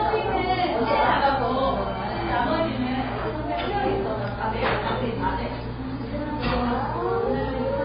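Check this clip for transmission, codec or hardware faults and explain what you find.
There is one fault, present for the whole clip.

Transcoding between lossy codecs, throughout: the sound is likely to have been encoded twice, in a chain that fits low-bitrate AAC-LC followed by WMA at twice the rate. The second encoder wastes bits reproducing the first one's artefacts and adds its own. The harsher band limit survives, so nothing is heard above 5 kHz and the two kinds of grit overlap.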